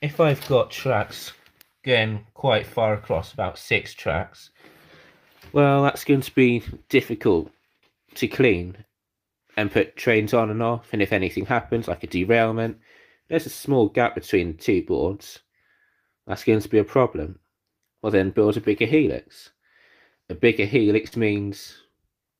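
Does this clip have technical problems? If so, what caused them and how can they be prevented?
Yes. From 21.07 to 21.13 s a brief smear is audible, the sound stretching oddly before blending back. This is short concealed packet loss: about 40 ms of audio arrived too late, and the receiver filled the gap by extending the preceding sound before blending into real audio. A steadier network path or a deeper jitter buffer would prevent it.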